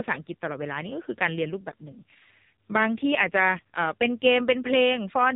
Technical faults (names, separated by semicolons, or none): AMR narrowband mobile codec